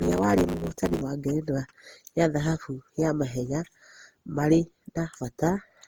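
Block size mismatch (truncated) affects the first 1.02 s of this speech clip, ending just before "wa ngerenwa ya thahabu". A 100 Hz buzz runs under the speech, which plays about 1.16 times too fast with its timbre unchanged. The end of each block is being dropped, consistent with one stage writing 512-sample blocks that the next stage reads in shorter lengths. Generation loss runs through the whole clip, which sounds swirly, smeared and hollow, with blurred attacks. The likely cause is repeated decoding and re-encoding with Opus at 48 kbit/s, around seven passes, each on a shifted frame grid that adds fresh quantisation noise.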